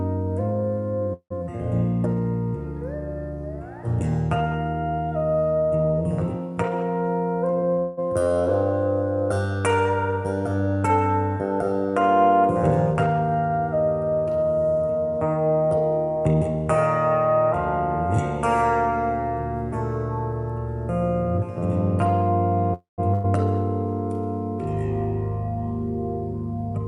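At 1.13 to 1.32 s, a call audio freeze: packets were likely held up in transit and the jitter buffer ran dry. The receiver stretched the last sound into a fading buzz or hiss that goes silent for about 80 ms. The audio then resumes where it stopped, pushed 171 ms later, with nothing lost.

From 7.48 to 7.79 s comes a jitter buffer speed-up. The buffer held surplus audio, so the receiver cut repeated pitch-period slices, about 70 ms in all. The sound runs at 122% speed with unchanged pitch and seems hurried.

Right after, at 7.79 to 8.07 s, another freeze, likely from packets held up in transit, fills 183 ms with a decaying continuation that never quite reaches silence. The audio then carries on intact.

Two more speed-ups follow, each hurrying the sound without any pitch shift. The first runs from 12.94 to 13.59 s at 116%, trimming about 100 ms. The second runs from 15.36 to 16.35 s at 117%, trimming about 150 ms.

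At 22.74 to 23.00 s, a third freeze, likely again late-arriving packets, holds the last sound for 243 ms. It fades to about 140 ms of silence before the audio resumes.

At 23.14 to 23.26 s there is a burst of packet loss: roughly 100 ms of packets never arrived in time. The receiver covered the gap with a fading continuation, and the audio jumps ahead with that stretch missing.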